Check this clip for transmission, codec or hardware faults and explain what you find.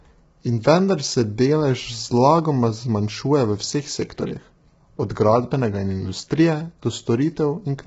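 The speech has one problem running the whole way through: low-delay AAC compression, likely AAC-ELD at a rate down around 16 kbps. At so few bits its frequency lines are coarsely quantized, so voices sound rough and grainy, with noise filling the gaps and nothing above 7.8 kHz.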